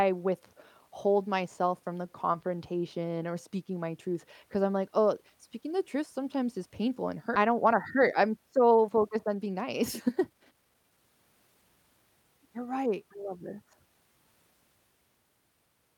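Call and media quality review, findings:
Skip ahead at 7.35 s: speech jumps forward with no silent gap, about a second and a half of audio missing, sides joined directly. Jitter buffer probably discarded queued audio on overflow. Unlike a dropout, nothing is muted; content simply vanishes.

Jitter buffer speed-up, 8.63 to 11.90 s: speech runs about 124% fast and sounds hurried, yet pitch stays normal. The receiver repeatedly trimmed pitch-period-sized pieces to shed backlog, roughly 0.7 s total. Not a resampling error, which would raise pitch too.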